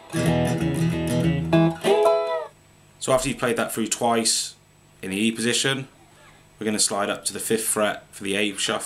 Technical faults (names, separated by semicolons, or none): electrical switching spike